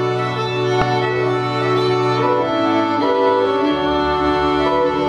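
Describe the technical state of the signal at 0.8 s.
Damaged data in a compressed stream at 0.79 to 0.82 s: corrupted bytes make the decoder misread frames and lose sync, producing a brief chirp or blip.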